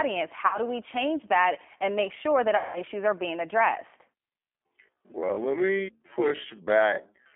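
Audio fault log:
Throughout: G.729 codec. The speech is confined to roughly 250 Hz to 3.4 kHz, and the codec damage is plainly audible as a rough, synthetic grain, which fits G.729A at 8 kbit/s. The decoder rebuilds each 10 ms frame from a vocal tract filter, a pitch predictor and a few pulses, so the waveform is modelled rather than kept. That resynthesis sets it apart from a simple telephone band filter, which would only sound thin, not artificial.
0.47–0.58 s and 2.57–2.82 s: VoIP packet loss concealed by the speech codec. About 60 ms and then 180 ms of audio went missing, consistent with two and then six lost packets. The decoder filled each gap by extending its last pitch and filter at falling gain, giving a buzzy, fading stretch rather than silence. Recovery lags a little after each gap because every frame depends on the previous one. A plain dropout would leave a clean hole.
4.36–7.36 s: time-stretched section. 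From 4.36 s to the end, the pace drops abruptly to about 0.58 times normal speed while the pitch stays where it was, so the speech drags and can sound smeared or doubled. The likely cause is software lengthening the audio by repeating short pieces. Slowed playback would also lower the pitch, and here it does not.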